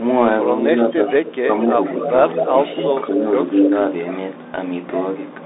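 The whole clip has the sound of a Bluetooth CVSD headset codec. Nothing passes above about 3.8 kHz, and the line band sits near 300 Hz to 3.7 kHz. The one-bit, 64 kHz coding plainly roughens the speech. Sibilants turn scratchy, and a granular hiss runs underneath.

From 0.61 to 1.56 s, the speech dips by up to about 10 dB, in pieces totalling about half a second. This is speech suppressed in double talk. An echo canceller likely ducked the talker while the far side spoke. From 1.25 to 1.46 s, an echo leak adds a faint copy about 207 ms late, some 20 dB down. Residual loudspeaker pickup was likely sent back.

From 1.94 to 3.25 s, the speech drops again, more gently, by up to about 5 dB over roughly half a second. From 2.0 to 2.95 s, a stronger echo leak trails by 228 ms, only about 10 dB below the speech.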